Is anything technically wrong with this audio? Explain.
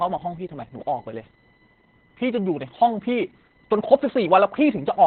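Yes, two faults run through the whole speech clip.

USB whine: USB bus current in 1 ms frames leaks through power or ground, producing a steady 1 kHz harmonic series, strongest at 6 kHz and roughly 35 dB below the speech.

Opus voice compression: the speech is cut off above 4.2 kHz and sounds muffled, hoarse and slightly robotic. That fits the SILK coder in narrowband mode at a very low bitrate, around 8 kbps, with heavy coding damage.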